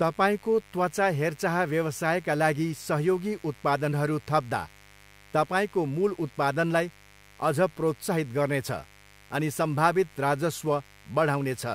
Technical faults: mains buzz

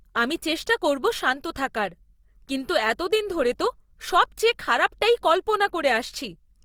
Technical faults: Opus compression

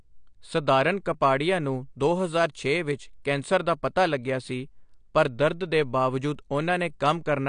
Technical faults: AAC compression

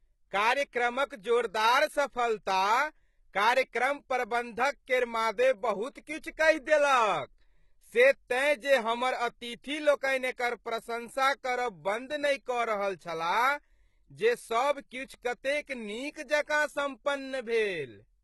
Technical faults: HE-AAC compression; pre-echo

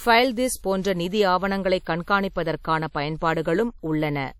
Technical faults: WMA compression; pre-echo

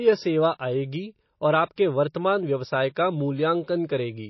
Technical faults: MP3 compression; pre-echo

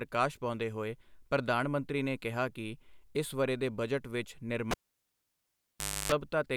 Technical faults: cable pulled and plugged in

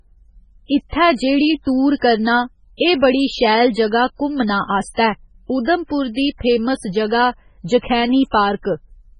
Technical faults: MP3 compression

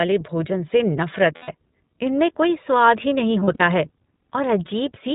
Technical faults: iLBC codec; lost iLBC frames

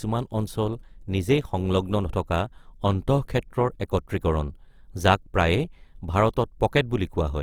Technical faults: Opus compression

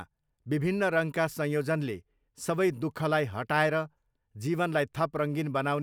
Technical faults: none

